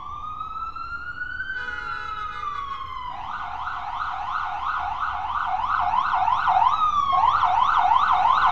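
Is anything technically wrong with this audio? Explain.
No, nothing technically wrong turns up anywhere in this recording of sounds.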